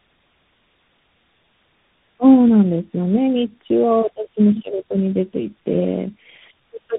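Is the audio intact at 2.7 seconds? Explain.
No. At 2.7 seconds, as throughout the clip, the speech shows tandem speech coding: it seems to have passed through several speech codecs in a row, likely three, with each re-encoding an already damaged signal. The sound points to a chain ending in a CVSD-style coder. Errors stack, so the voice comes out rough, muffled and warbly, with nothing above 3.8 kHz.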